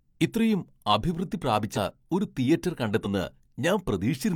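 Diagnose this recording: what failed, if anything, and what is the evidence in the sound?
Codec-stage fault, compressed frames skipped: at 1.73–1.78 s the speech jumps ahead about 40 ms, and at 3.01–3.06 s roughly 100 ms. Both jumps fit whole 42.7 ms frames dropped or rejected by the decoder.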